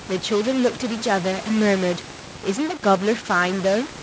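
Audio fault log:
Throughout, stuck bit: distortion and noise filling the pauses, likely from one data bit held fixed, offsetting about half the sample values.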